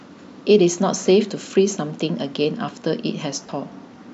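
Lost LE Audio frames at 3.46 to 3.49 s briefly interrupt the speech. About 22.5 ms of signal went missing, which fits three 7.5 ms frames dropped in a row. The decoder covered the gap by repeating the last received spectrum with its signs scrambled, so instead of a clean dropout there is a short, noisy smear where the speech loses its definition before normal decoding resumes. The light, slightly grainy texture around it likely comes from LC3 coding at 64 kbps.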